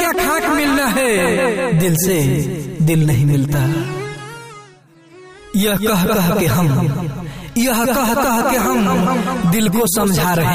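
Nothing in this recording stands out as a technical fault; it all sounds the way it should the whole way through.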